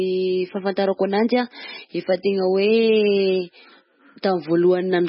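Throughout, the speech stops dead above 5.6 kHz and sounds watery and swirly, heavy damage likely from MP3 compression at a bitrate as low as 16 kbps.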